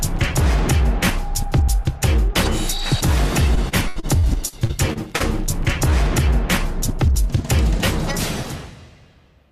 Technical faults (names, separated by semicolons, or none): repeated packet loss (robotic sound)